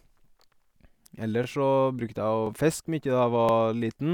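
Overlapping chunks show up at 0.42, 1.44, 2.47 and 3.49 s. Each one-second block starts 23 ms early, so that sliver replays as a regular little stutter.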